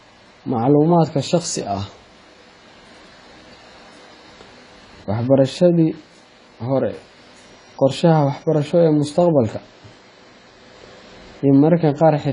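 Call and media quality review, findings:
Speech dull throughout, nothing above 10 kHz, sibilants warbly and smeared; likely AAC compression, fits roughly 24 kbps AAC-LC. Warble separates it from plain low-pass filtering.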